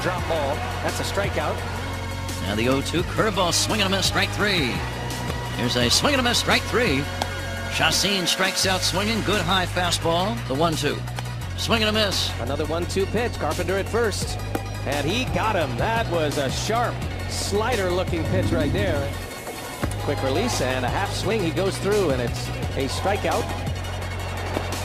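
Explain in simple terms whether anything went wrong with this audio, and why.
Four tiny skips occur, at 13.35, 15.34, 21.31 and 23.29 seconds. Each is an overlap between stream segments. The audio arrives in 2-second pieces whose timing labels overlap slightly, so the player discards about 5 ms of sound it wrongly treats as duplicated. The waveform then jumps abruptly, which is heard as a click or a very brief skip. Pairs of these skips fall roughly two seconds apart, matching the segment boundaries.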